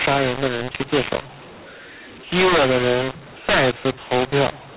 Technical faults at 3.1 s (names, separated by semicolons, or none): mu-law and A-law mixed up